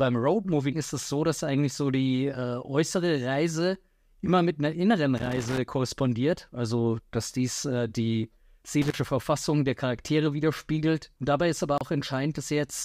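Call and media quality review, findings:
Irregular scratchy crackle bursts, 5.17–5.58 s and 8.82–8.95 s. Loose connector crackle: worn contact intermittently breaking the signal path, chopping audio.

29 ms silent gap at 11.78 s, sound resuming as if it had played on. Likely a Bluetooth dropout, consistent with a couple of late packets discarded.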